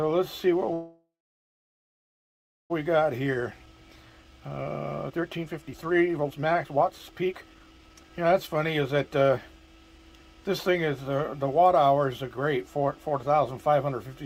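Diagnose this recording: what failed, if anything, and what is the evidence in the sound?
Network stage: from 0.73 to 2.72 s a call audio freeze, likely stalled packets, stretches the last sound into a fading buzz or hiss, then about 1.6 s of flat, empty waveform.

Jitter buffer speed-up at 2.98 to 4.66 s (112%) and 5.10 to 10.42 s (132%): pitch-period cuts remove roughly 0.2 s and 1.5 s, compressing spectrogram events without shifting harmonics.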